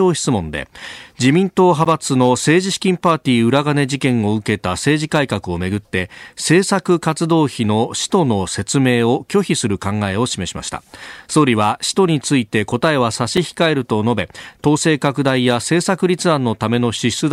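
At 1.85 s the output buffer seems not to have been filled in time, leaving a block of digital silence about 11.6 ms long, which fits a 512-sample buffer. The speech drops straight to silence and returns with no fade, and the gap is heard as a tick or dip. A shorter block of digital silence at 13.37 s, about 5 ms, is likewise heard as a tick or dip.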